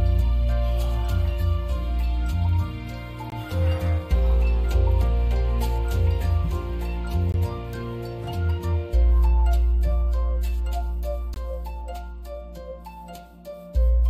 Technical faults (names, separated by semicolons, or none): gap between chunks